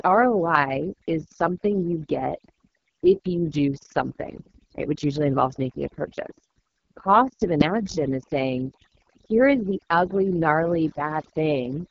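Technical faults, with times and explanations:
Throughout, overdone noise removal: the background drops away and breaks into twinkling, warbling specks, and quiet parts of the speech vanish with it. An over-strong noise reducer cuts individual frequency bands far down whenever they sit near its noise estimate.
Throughout, AMR wideband (HD Voice) codec: the speech is rough and raspy, with nothing above 7.5 kHz. That heavy damage fits AMR-WB's lowest 6.6 kbit/s mode, where its pulse-driven vocal tract model has too few bits to rebuild the speech cleanly.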